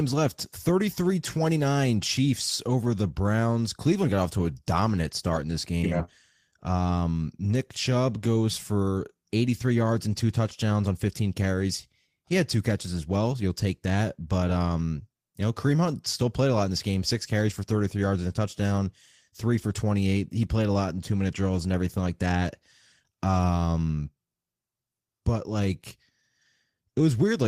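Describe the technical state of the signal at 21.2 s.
At 21.2 s the speech signal is intact, with no audible dropout, clipping, glitch or other fault.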